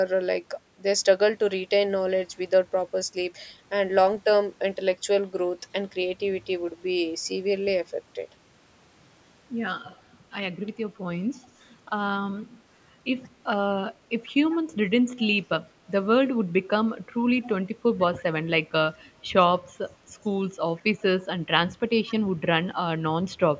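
Echo leak appears at 9.83, 13.23, 14.26, 18.17, 19.9, 20.76 and 22.07 s as brief, faint copies of the speech trailing it by 144 ms, roughly 20 to 40 dB down. The likely cause is a loudspeaker endpoint whose echo canceller let residue back into the call.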